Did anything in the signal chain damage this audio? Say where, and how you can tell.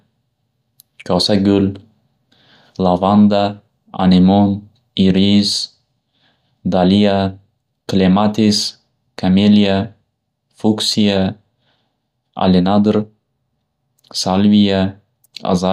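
No, nothing in the signal chain damaged this speech recording. No stage between capture and playback leaves any audible trace of trouble.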